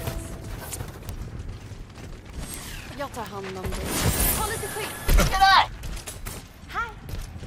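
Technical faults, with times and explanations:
0.12 to 7.37 s, word clock ticks: a tick about five times a second, as two unlocked clocks drift roughly 100 ppm apart and slip a sample.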